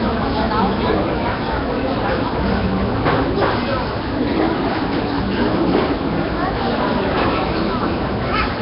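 Nellymoser compression runs throughout this recording of sounds, most likely from the Flash-era Nellymoser Asao codec. Its coarse fixed allocation leaves a hissy, noise-filled, smeared texture with nothing above 5.3 kHz, which fits a stream near 22 kbps.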